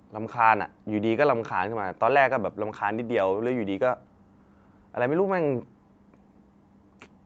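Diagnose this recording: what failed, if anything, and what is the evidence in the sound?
Nothing in the signal has failed: the speech stops at 8 kHz, the limit set by the call microphone processing and the Opus codec on the WebRTC call path, and its coding texture fits a call codec running at about 48 kbps.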